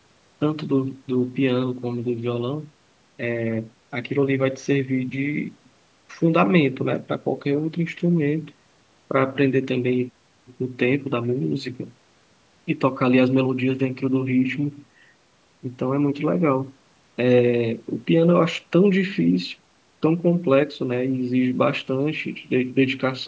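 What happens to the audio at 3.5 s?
At 3.5 s the speech plays through intact, with nothing breaking into it beyond the normal bass trimming of the call's microphone processing.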